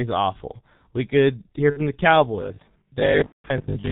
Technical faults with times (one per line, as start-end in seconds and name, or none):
0.00-3.92 G.723.1 codec
1.70-1.80 VoIP packet loss concealed by the speech codec
3.26-3.48 VoIP packet loss concealed by the speech codec